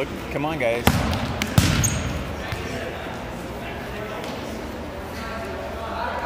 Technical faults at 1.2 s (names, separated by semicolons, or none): clock drift buffer slips